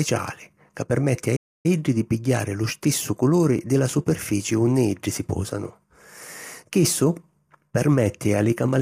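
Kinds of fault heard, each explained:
Low-delay AAC compression: Throughout the speech the voice sounds rough and grainy, with a hiss-like fill between the harmonics and a thin, somewhat synthetic top band. This is likely the low-delay AAC-ELD codec used in video calls, whose short frames resolve pitch poorly, and the damage fits a bitrate around 32 kbps. On a spectrogram the harmonic lines look smeared and noisy between them, with blocky, patchy energy across the upper frequencies.
Playback stall: At 1.36 s, right after "ca permetti a", the sound cuts off in mid-flow and stays silent for about 282 ms before resuming with "di pigghiari lu stissu" at 1.66 s. The likely cause is the player running short of data or having its thread blocked, so output went silent until it recovered. The waveform shows a flat, near-silent line across the gap, and the spectrogram shows a clean vertical blank band.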